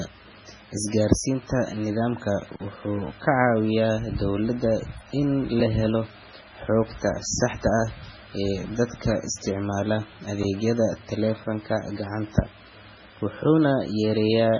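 Likely MP3 compression throughout: starved of bits, the encoder cuts everything above 10.3 kHz, fitting about 16 kbps, and weak lines flicker, making speech watery.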